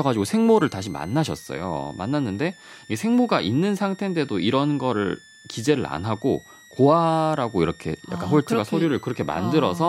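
It's a speech clip with a switching supply whistle running under it from start to finish: a thin high tone sitting around 2 kHz, wandering between about 1.73 and 2.1 kHz, roughly 30 dB down from the voice. That's the signature of a switching power supply dropping into an audible burst mode, or two supplies beating against each other, with the pitch shifting as the load changes.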